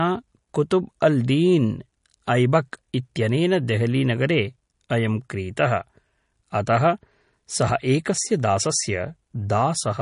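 Throughout the speech, the sound has a plainly audible watery swirl and nothing above about 10.6 kHz, likely from MP3 compression at a rate that fits roughly 40 kbps. Starved of bits, the encoder drops the treble and lets weak frequency components flicker frame to frame, unlike a clean low-pass filter, which removes highs without that warbling.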